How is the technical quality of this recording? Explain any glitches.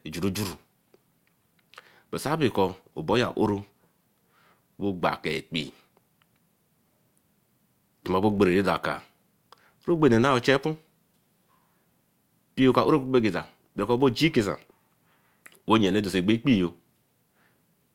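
The recording has one fault running through the whole speech clip: a filter restarted on every block. Its state resets each 20 ms block, so every block starts with a tiny transient, a 50 Hz buzz that rises and falls with speech level, unlike steady mains hum.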